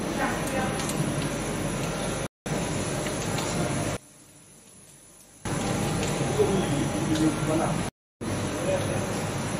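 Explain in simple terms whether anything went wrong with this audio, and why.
A playback stall hits at 2.27 s: the sound cuts to silence for about a fifth of a second, until 2.46 s, then carries on. The likely cause is the player running short of data or being held up, leaving nothing to play.

One channel inverted shows up from 3.97 s to 5.45 s: the sound suddenly becomes much quieter. Most likely one side of the stereo signal is flipped upside down, so when both sides are combined, the shared part cancels itself out.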